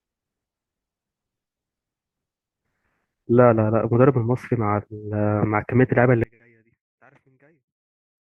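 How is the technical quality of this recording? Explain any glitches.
One fault stands out, near the end of the speech. From 6.24 s to the end at 8.36 s, the voice drops away sharply, by about 37 dB. What remains is a faint trace. The likely cause is one channel inverted. One side of the stereo pair has its polarity flipped. When the two sides are summed to mono, everything they share cancels. A centred voice is almost entirely shared, so it nearly vanishes. Only the small difference between the channels survives.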